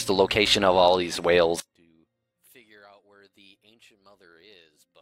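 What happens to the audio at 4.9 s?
One stereo channel has likely had its polarity inverted, the one channel inverted fault, running from 1.60 s to the end of the clip. When the two channels are summed, their shared content cancels, so at 4.9 s the sound drops by about 32 dB to a faint residue.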